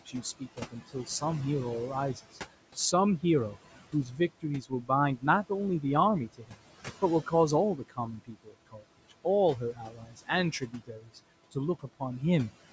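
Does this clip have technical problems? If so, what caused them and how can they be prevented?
Yes. Noise suppressor artifacts run through the whole clip. The suppressor pulls the steady room noise, which sits about 16 dB below the speech, down by about 17 dB between phrases. It then lets the noise back up under the speech, so the background pumps. Prevention: reduce the room noise at the source, or use a gentler suppression setting, so the processor has less to remove.

Speech cut by the noise suppressor happens at 0.06 to 1.22 s, 3.93 to 5.5 s, 6.34 to 6.57 s, 7.77 to 9.25 s and 9.73 to 11.18 s. In each stretch, a few hundred milliseconds of soft speech was mistaken for noise and turned down. The deepest drops are about 15, 17, 18, 18 and 13 dB, so quiet sounds and endings come out swallowed. Prevention: lower the suppression strength or place the microphone closer so speech stands well above the noise floor.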